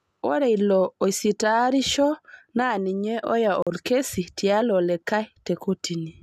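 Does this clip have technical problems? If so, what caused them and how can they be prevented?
Yes. A gap between stream segments falls at 3.62 to 3.67 s, right after "oisitaarisho naa ninye oya" and before "olkesi tialo". The sound stops dead for 42 ms and resumes with hard edges. The timestamps of two adjacent segments don't line up, leaving a short hole that the player fills with silence; its position points to a boundary between 4-second segments. Nothing is lost, only delayed. Prevention: generate segment timestamps from a continuous sample count so each segment starts exactly where the previous one ends.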